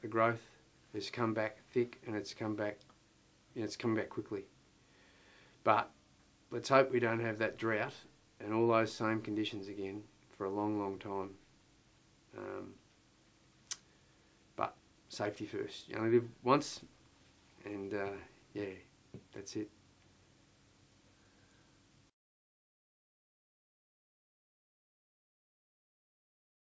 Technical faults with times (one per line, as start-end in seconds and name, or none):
none